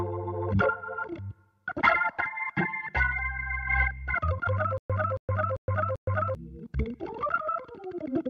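A playback stall, likely the player or stream starving and retrying, causes a stutter with silent gaps from 4.78 to 6.35 s. At each retry the last fragment of audio, about 276 ms long, is played again and then followed by about 116 ms of dead digital silence, so the same burst returns four times at a steady 392 ms pace. The material that should have played across that stretch never arrives.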